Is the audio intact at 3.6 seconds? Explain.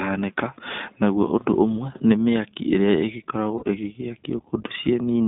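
No. Lost iLBC frames break the speech from 3.58 to 3.64 s, a gap of about 40 ms, which fits two missing 20 ms frames. The decoder fills it by repeating the last pitch cycle blended with noise, so the gap sounds like a brief held, slightly buzzy vowel before normal speech resumes almost at once. Across that moment the iLBC codec also limits the band to roughly 200 Hz to 3.7 kHz, and its plainly audible coding damage leaves the speech slightly rough and synthetic.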